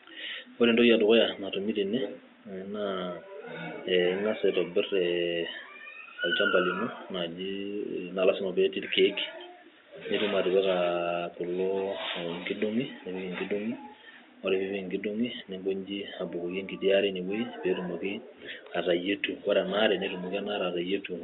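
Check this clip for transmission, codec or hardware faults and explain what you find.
No transmission, codec or hardware fault can be heard in this speech clip. The room noise in the background sits about 36 dB below the speech and belongs to the recording space rather than to the system.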